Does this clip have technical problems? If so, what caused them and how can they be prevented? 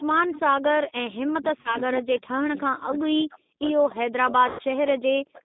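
Yes. The G.729 codec is at work throughout. It rebuilds the speech from a vocal tract filter, a pitch predictor and a few pulses per frame at 8 kbit/s, confining the sound to roughly 200 Hz to 3.7 kHz and giving it a plainly rough, synthetic edge. A wideband codec such as G.722 or Opus would prevent this.

An echo leak appears from 0.32 to 0.40 s: a faint copy of the far side returns about 354 ms late, roughly 15 dB below the speech, likely because a loudspeaker echo canceller let some of its microphone pickup through. Headsets or a better-tuned echo canceller would prevent it.

Speech suppressed in double talk occurs from 1.28 to 3.65 s and again from 4.01 s to the end. The voice dips very deeply, at times almost vanishing, likely because an echo canceller could not tell the talker from loudspeaker echo while both sides spoke. Less aggressive suppression or headsets would prevent this.

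VoIP packet loss concealed by the speech codec hits at 1.61 to 1.78 s (40 ms lost, consistent with two packets) and 4.49 to 4.62 s (100 ms lost). The decoder stretched the last pitch and filter into a fading buzzy tone or coloured noise, and the voice stays weak briefly afterwards. A more stable network or a jitter buffer with redundancy would prevent it.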